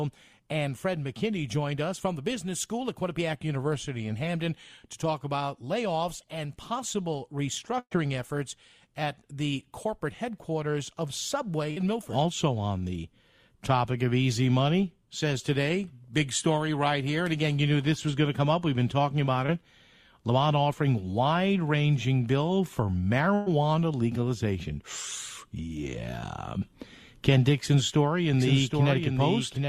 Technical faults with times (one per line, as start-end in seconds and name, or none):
7.79-7.93 burst of packet loss
11.71-11.78 burst of packet loss
19.46-19.50 short concealed packet loss
23.34-23.48 burst of packet loss
28.33-29.68 doubled audio track